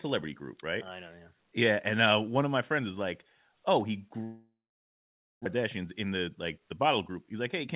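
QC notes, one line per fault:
4.24–5.48 s, long network dropout: audio stopped arriving, likely from a network outage. The receiver stretched the last sound into a fading buzz, then about 0.89 s of near-silence follows. Roughly a second of material is lost outright, and the sound resumes further on.
5.57–7.67 s, jitter buffer speed-up: after the gap, late audio arrived in a burst and overfilled the buffer. The receiver trimmed short pitch-period slices repeatedly, about 0.2 s in total, so playback runs around 8% fast at unchanged pitch and sounds hurried.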